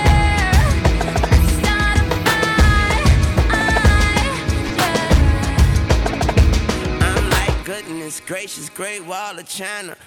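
At 4.69 s there is a brief blip from lost LE Audio frames. A gap of about 7.5 ms, which fits a single lost LC3 frame, was filled by the decoder repeating the previous spectrum with randomised signs. What you hear is a momentary noisy smear, not a true gap. A plain dropout would leave a hole of silence, and a buffer underrun would click hard. Light lossy compression also runs underneath.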